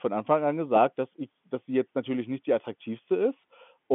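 Nothing in this speech recording shows a technical fault. The G.711 telephone coding is audible as a narrow line band running from about 150 Hz up to 3.5 kHz, with nothing passing above it.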